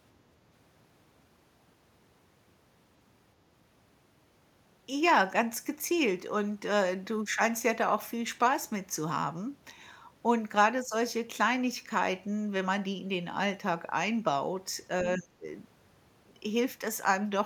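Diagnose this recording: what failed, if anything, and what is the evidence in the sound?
Other side's voice leaking through, at 15.16 to 15.20 s. A brief scrap of a second voice appears, about 15 dB below the main speech. The stage is call processing. The likely cause is an echo canceller leaving loudspeaker playback in the microphone signal.

Speech suppressed in double talk, from 15.17 to 15.45 s. The main speech dips sharply, by about 25 dB at its deepest, while that second voice overlaps it. This is call processing again. The echo canceller likely could not separate its talker from the echo, so it turned both down.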